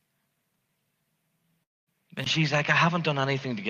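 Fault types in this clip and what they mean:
Long network dropout: at 1.63 s about 240 ms goes missing, a short fading fill then near silence, likely a network gap, before the speech resumes.
Input switched to a poorer device: from 2.24 s, after a 20 ms gap, the sound dulls with nothing above 6.7 kHz and new background noise, likely a different microphone.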